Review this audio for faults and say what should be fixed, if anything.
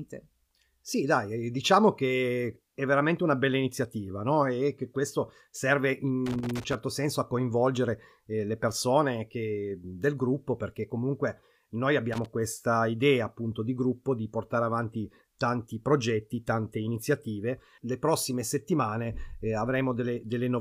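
A worn or dirty contact in a connector was making and breaking as the cable moved, which is loose connector crackle. Each break chops the speech signal, and any DC on the line turns the transitions into pops. Here it shows as two irregular bursts of crackle and scratching, from 6.26 to 6.75 s and again, shorter, from 12.13 to 12.26 s. Cleaning or replacing the connector and strain-relieving the cable so it cannot flex at the contact will prevent it.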